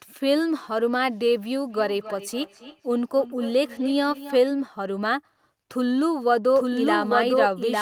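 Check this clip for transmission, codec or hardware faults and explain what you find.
Two faults show up in this speech. From 1.69 to 4.45 s there's feedback echo between two devices: the speech comes back about every 0.3 s, peaking around 16 dB below the voice. Another device's speaker is feeding this microphone, and its own canceller can't remove that. From 6.55 s to the end there's a doubled audio track, with a full-band copy about a second behind at roughly equal level, likely from a second, slower capture path.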